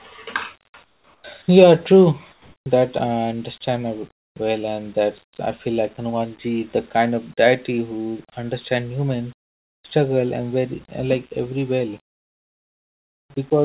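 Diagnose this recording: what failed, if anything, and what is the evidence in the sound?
In the pauses at 0.84 to 1.24 s, 2.32 to 2.66 s, and 12.12 to 13.3 s (just after "every well"), the real room background gives way to a flat, featureless hiss, about 9, 5 and 7 dB quieter than what surrounds it. This is comfort noise in place of the background, likely from discontinuous transmission in call processing. The sender stopped sending during silence, and the receiver filled each gap with synthetic noise roughly matched to the background. The speech is band-limited to 4 kHz, consistent with the G.711 mu-law call path.

At 1.42 to 1.48 s, about 30 ms of speech is lost and 60 ms is replaced by the same steady noise, so the sound is briefly clipped before it resumes. This is likely sound dropped by the voice detector, again in call processing. The sender's detector took the speech for background and stopped sending, so comfort noise covered that stretch until the detector triggered again.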